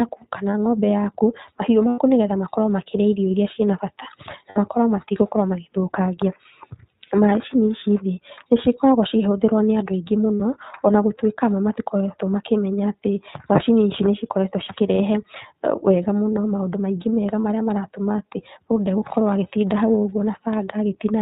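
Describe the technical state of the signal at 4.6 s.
At 4.6 s the signal is just coming out of a burst of lost iLBC frames, spanning 4.50 to 4.58 s. The decoder filled the gap by repeating the last pitch cycle mixed with noise. It sounds like a held, slightly buzzy vowel. The 60 ms gap fits three missing 20 ms frames. Clean decoding resumes almost at once, because each frame stands alone.

Underneath, the whole recording carries the iLBC codec. Its narrowband coding removes everything above 4 kHz, and the damage is plainly audible as a rough, synthetic edge on the speech. The 20 ms framing and the sound quality fit the 15.2 kbps mode.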